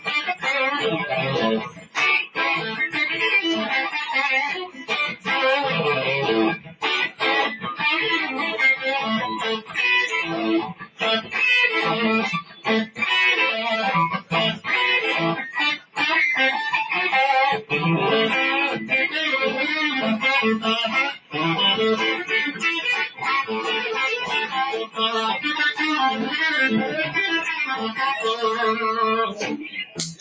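Throughout the clip a noise suppressor applied to music or sounds, though designed for speech, keeps treating sustained and ambient material as noise. Its gain rides up and down by roughly 10 dB, so attacks pass while held tones and decays are pulled down. The result is a pumping, fluttering texture that thins the body of the sound. The band also stops at 8 kHz, which comes from the call's microphone path.

Within that, there are five stretches of sound cut by the noise suppressor: 0.00–2.38 s, 4.66–7.22 s, 9.59–15.98 s, 21.12–24.99 s and 27.50–30.21 s. In each, the suppressor clamps harder on steady or fading content, with dips reaching about 15 dB (about 13 dB in the last). The affected moments add up to well under a second per stretch, except the 9.59–15.98 s stretch, where they total around a second and a half. Tails are audibly truncated and sustained parts sink below the transients around them.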